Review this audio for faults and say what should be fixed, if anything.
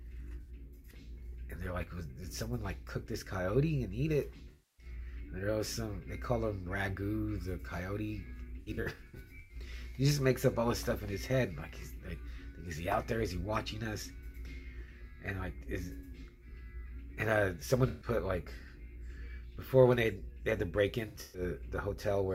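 AAC frame loss with concealment occurs five times: 0.41 to 0.50 s, 4.50 to 4.86 s, 8.60 to 9.55 s, 17.88 to 18.08 s, and 21.08 to 21.42 s. In each gap the decoder rebuilds missing frames from the last good spectrum. Short gaps sound smeared and phasey. The 8.6 s stretch is patchy, with losses scattered across nearly a second and the longest run around a tenth of a second. Sending the stream with error protection or retransmission would prevent these dropouts.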